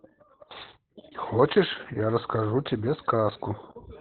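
Opus voice compression runs through the whole of this short speech clip. The coder is working in its SILK linear-prediction mode at narrowband, so nothing survives above about 4.3 kHz. The voice sounds muffled and boxy, and the excitation is coded so coarsely that it takes on a hoarse, faintly robotic grain. That heavy damage points to a very low bitrate, around 8 kbps, coded in 20 ms frames.

Chunks out of order appear at 0.51 to 0.56 s. A block of audio about 23 ms long plays one slot late, after the chunk that should have followed it. No audio is lost, but the sequence is scrambled across three abrupt joins. The result is a brief jumbled stutter in the speech.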